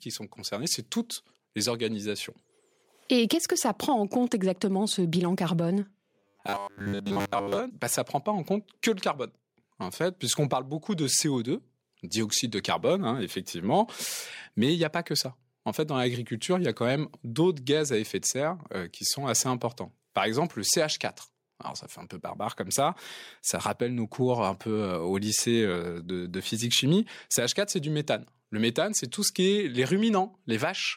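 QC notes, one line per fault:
0.48 to 2.36 s, automatic gain rising: the speech and the room tone behind it swell together by about 3 dB over nearly two seconds, a slow lift rather than a step, so the background climbs along with the talker. This is the gain control judging the input too quiet and ramping its gain upward gradually; because it scales everything it receives, noise and voice rise as one instead of the speaker simply getting louder.
3.11 to 5.8 s, automatic gain falling: the speech sinks by about 4 dB across roughly two and a half seconds, with its background dropping in step. Here the gain control judged the input too loud, or its background noise too strong for the gain it started with, and eased its gain back down. The shared fall of speech and ambience, and the slow, smooth slope, mark it as processing pulling the level rather than the talker moving away or quieting.
6.19 to 7.6 s, robotic sound from repeated short buffers: just before "ça bah ça prend" the speech collapses into a rigid metallic buzz pitched at 100 Hz that still loosely tracks the syllables, with most of the audio in that stretch replaced. 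The likely cause is new audio arriving too late, so playback keeps looping the last 10 ms chunk while real audio is dropped; repeating a fixed 10 ms block imposes that steady 100 Hz pitch.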